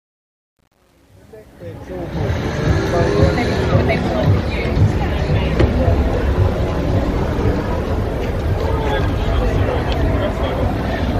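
The fade-in from 0.0 to 2.34 s sounds gritty, worst up to 1.9 s: truncation distortion, consistent with roughly 9-bit undithered gain steps squaring the quiet waveform.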